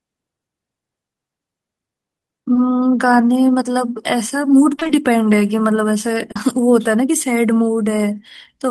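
Speech with two brief smears, at 2.53 to 2.57 s and 6.31 to 6.37 s, is short concealed packet loss: about 20 ms and then 40 ms of audio arrived too late, and the receiver bridged each hole by extending the preceding sound before blending back. Between 4.75 and 4.91 s the sound turns choppy. That is repeated packet loss, with gaps of up to 20 ms recurring so closely that roughly half of that stretch is patched-in continuation, which fits about four separate dropouts.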